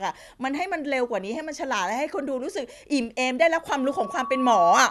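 From 3.72 s to the end at 4.90 s, loudspeaker feedback squeal: the microphone re-amplifies its own loudspeaker, so a lone 1.1 kHz tone swells over about a second to about 5 dB above the speech. Unlike a steady interfering tone, it keeps growing.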